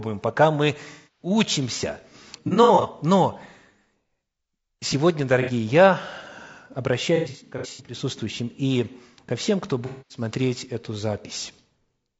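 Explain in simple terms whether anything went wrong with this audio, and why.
Yes, two things went wrong. Throughout, the speech sounds rough and grainy, with a hissy, artificial top end. That's likely low-delay AAC compression, the video-call codec, squeezed hard enough that its short frames can't keep the voice clean.

On top of that there's AAC frame loss with concealment: chunks of audio went missing and the decoder patched them by smearing the last good sound. You hear noisy, phasey blurs at 0.92–1.30 s right after "пока мы", at 2.48–2.86 s, briefly at 5.42–5.51 s, at 7.16–7.97 s, and at 9.86–10.21 s after "и ко всем кто".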